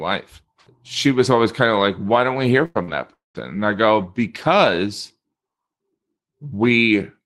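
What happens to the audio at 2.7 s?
From 2.65 to 2.78 s the sound stretches into a held sound that fades for about 96 ms and then picks up further on, with about 100 ms skipped. This is a burst of packet loss: the receiver extended the last audio and faded it until packets arrived again. Around 2.75 to 2.77 s a brief 20 ms stretch sounds rougher and noisier rather than silent. That lost packet was rebuilt from error correction, a low-bitrate copy carried in the following Opus packet.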